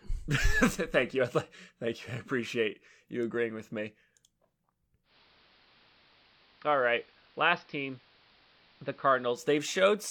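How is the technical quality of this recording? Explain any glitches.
The recording has one clear fault, a digital radio blending to analogue, running from 5.03 s to 9.44 s. At 5.03 s the hybrid receiver loses its digital stream and cross-fades, over about 133 ms, to the station's AM analogue broadcast. The AM path carries less treble, so the speech turns duller. Level drops by about 3 dB, and a hiss floor roughly 30 dB below the signal appears. At 9.44 s the receiver recovers the digital signal and blends back.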